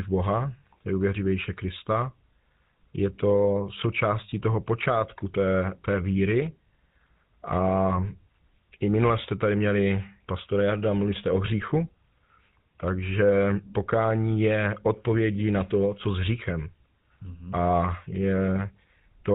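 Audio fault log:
Throughout, GSM full-rate codec. The speech has a buzzy, gravelly roughness. The codec models the vocal tract and drives it with regularly spaced pulses. It keeps only every third excitation sample. Nothing passes above 4 kHz, which fits a 13 kbps stream.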